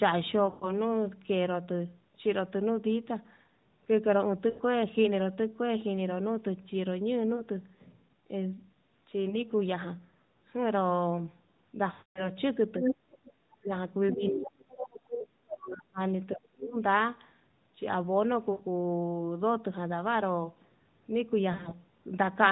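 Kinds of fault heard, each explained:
lost AMR speech frames: Radio errors corrupted speech frames, and the narrowband decoder filled the gaps by repeating its last good settings at falling level. Single lost frames at 7.36 and 9.30 s cause brief dips or warbles. Longer runs, up to 240 ms at 11.92 to 12.29 s, stretch the sound and fade it toward silence.
speech suppressed in double talk: The echo canceller likely could not separate the talker from the loudspeaker's echo while both sides spoke, so it turned everything down. The talker drops by roughly 40 dB from 14.15 to 15.99 s, by about 35 dB from 16.34 to 16.77 s, and briefly at 12.8 s.
other side's voice leaking through: The echo canceller likely failed to remove all of the loudspeaker sound from the microphone, so a second voice comes through. From 12.81 to 12.95 s it is about as loud as the talker, and near 14.1 s it is fainter, about 10 dB down.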